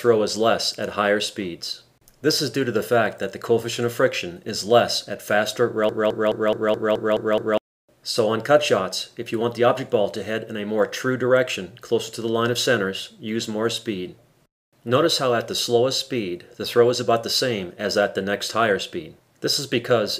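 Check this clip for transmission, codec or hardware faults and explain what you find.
One fault is present. Broken-record loop, 5.9 to 7.6 s: the player, encoder or stream has likely stalled and kept resending its last held fragment. A 0.21 s piece repeats exactly, back to back, eight times, and whatever audio belonged in that stretch is lost.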